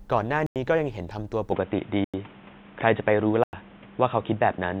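Three times a block of digital silence of about 93 ms appears, which fits a 4096-sample buffer. The first runs from 0.46 to 0.56 s, and the speech cuts out and back with no fade.

At 1.51 s, with no gap, the input was likely switched to a poorer device. Everything above 3.8 kHz is gone, so the speech turns dull and boxy through to the end. The level shifts by a few decibels, and a new, faint background noise sits well under the speech.

Two more 93 ms blocks of digital silence follow on the new input, from 2.04 to 2.14 s and from 3.44 to 3.53 s. Each is a short hole.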